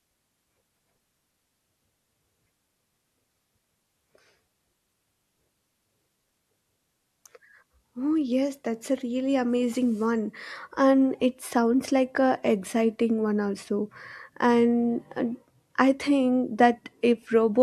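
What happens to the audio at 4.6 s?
Nothing goes wrong at 4.6 s; the speech carries on intact through that moment, with no dropout, click or distortion.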